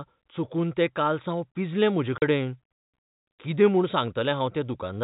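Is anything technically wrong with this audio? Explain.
Yes. At 2.18 to 2.22 s the speech drops out completely for 40 ms, a sharp hole with hard edges where the sound is cut off and then resumes abruptly. This is packet loss filled with silence. Audio data failed to arrive, and the receiver played nothing in its place. The gap length fits two lost 20 ms packets. The narrow telephone band heard throughout, with nothing above 4 kHz, comes from the G.711 coding.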